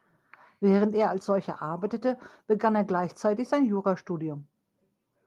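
No technical faults are audible.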